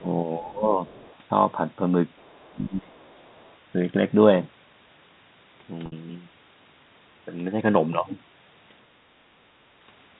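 At 0.00 to 0.05 s the echo canceller likely mistook the talker for loudspeaker echo during double talk and turned both down, so the opening is suppressed in double talk, dipping by about 15 dB. At 0.48 to 0.52 s the canceller likely left some loudspeaker signal in the microphone, and the other side's voice leaks through as a faint scrap about 35 dB under the speech. At 0.53 to 0.64 s the speech is again likely suppressed in double talk, dropping by about 10 dB. At 0.86 to 1.18 s the other side's voice likely leaks through once more, louder this time at about 25 dB below the speech, and again at 2.17 to 2.53 s at about 35 dB down. From 2.50 to 3.04 s the canceller likely clamped down hardest, suppressing the speech in double talk by as much as about 25 dB for half a second. Leakage of the other side's voice likely follows at 3.01 to 3.56 s, about 35 dB down. At 5.86 s, 60 ms of audio was lost, which fits three 20 ms packets. 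The receiver bridged the gap with pitch repetition, looping the last cycle, so a short, slightly buzzy held tone is heard before the speech resumes. At 9.00 to 9.12 s the echo canceller gated the microphone while the loudspeaker played, and the background dips by about 9 dB for about a tenth of a second before returning.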